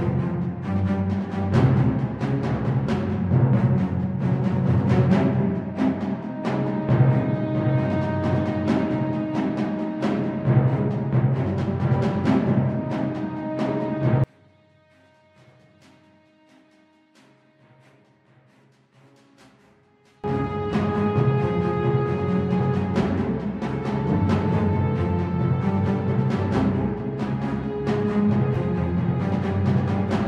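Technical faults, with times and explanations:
14.24 to 20.24 s, one channel inverted: for six seconds the sound collapses to a faint trace, dropping by about 34 dB, with its centre all but gone. What remains is faint, the small difference between the two sides. This is likely one stereo channel flipped in polarity, so that when left and right are summed to mono the shared material cancels and only what differs between them survives.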